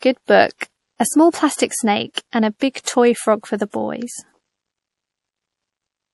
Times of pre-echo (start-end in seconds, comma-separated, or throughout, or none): 0.58-0.61, 2.13-2.17, 2.59-2.87, 3.70-3.74